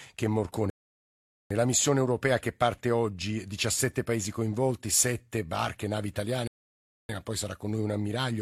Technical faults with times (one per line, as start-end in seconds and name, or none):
0.70-1.51 rebuffering stall
6.47-7.09 rebuffering stall